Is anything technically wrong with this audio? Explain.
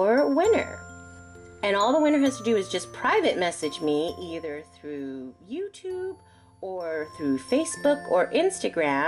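Yes. The clip has zipper noise in two places. From 3.81 to 4.60 s the level drops by roughly 10 dB in coarse steps, about 30 per second. From 6.85 to 7.20 s it rises by roughly 10 dB at about 70 steps per second. Each unsmoothed step adds a small click, heard as ticking that rides on the sound. On a spectrogram this shows as evenly spaced thin vertical lines, and on the waveform as a staircase envelope.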